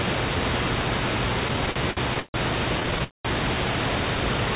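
From 1.48 to 2.36 s, repeated stalls (stutter) drag the speech: late packets emptied the jitter buffer nine times, the longest gap 144 ms, and each was filled by repeating the last sound. A spectrogram shows smeared, stretched harmonics, and the waveform shows bulging repeats. A milder run of six short stalls, none over 12 ms, follows from 2.80 to 3.02 s.

At 3.04 s comes a call audio freeze lasting about 0.21 s, most of it near-silent, likely from held-up packets. It appears as a flat waveform gap and a blank spectrogram column before the speech resumes at 3.27 s. Throughout, nothing above 4 kHz is present, consistent with a narrowband call codec.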